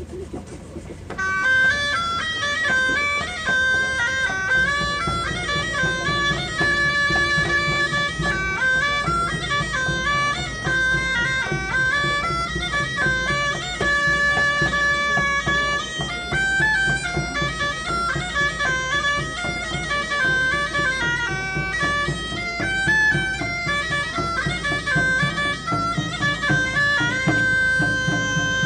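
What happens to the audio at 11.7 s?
Nothing goes wrong at 11.7 s; the audio carries on intact through that moment with no dropout, click or distortion.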